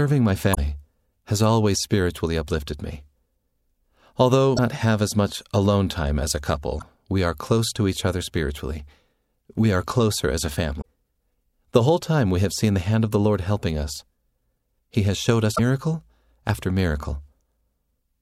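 Damaged data in the compressed stream breaks the speech at 0.51–0.58 s, 4.53–4.59 s (before "have as much alone"), 6.78–6.83 s (before "we are close to"), 10.78–10.86 s (after "are closer as a") and 15.53–15.60 s. Each time the decoder misreads corrupt frames and hunts for sync, producing a brief chirp, squawk, click or short hole.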